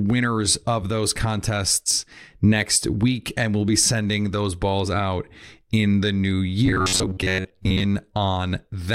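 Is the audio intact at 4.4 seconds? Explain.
Yes, at 4.4 seconds the speech runs intact, with no dropout, click, distortion or other fault at that moment.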